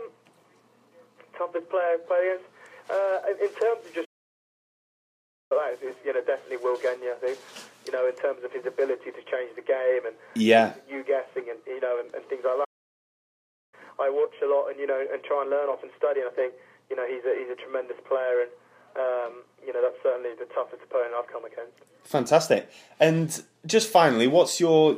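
At 4.05 s the sound just cuts out and stays silent until 5.52 s, roughly a 1.46 s gap, then picks back up. The same thing happens again from 12.64 s to 13.74 s, about 1.08 s of dead air. Both are playback stalls: the player likely ran dry of data or had its thread held up, so nothing reached the output until it recovered and carried on.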